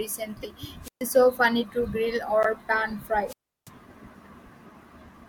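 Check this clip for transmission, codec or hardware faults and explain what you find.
The speech shows two kinds of fault: decoded corrupt frames and wireless microphone squelch dropouts. Each occurs twice.

A corrupt frame is decoded at 0.43 to 0.45 s and again at 2.43 to 2.46 s, just after "so funny to grill". Each hit spans about one frame. Damaged bits gave the decoder wrong gains or codes, so energy lands at wrong frequencies. The result is a short chirp or noise blip. The second is louder, peaking near -10 dBFS against roughly -20 dBFS for the first.

Wireless microphone squelch dropouts occur at 0.82 to 1.03 s, just before "so funny to grill", and at 3.26 to 3.70 s. The radio signal fades. Hiss rises, then the receiver's squelch mutes the output. The near-silent holes last about 128 ms and 340 ms before the voice returns.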